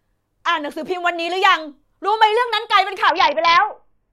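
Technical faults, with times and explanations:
3.09 to 4.13 s, Bluetooth SBC bit pool drop: the encoder's bit budget collapses, which fits a bit pool falling from 31 to 6, near 55 kbps. Starved upper sub-bands dull the treble and coarse quantisation adds grit. A spectrogram shows the top bands abruptly blanked, speckled noise below.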